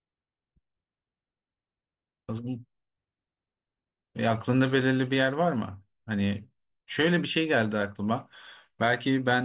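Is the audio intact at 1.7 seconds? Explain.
Yes, at 1.7 seconds the speech plays through cleanly with no dropout, click, distortion or other fault.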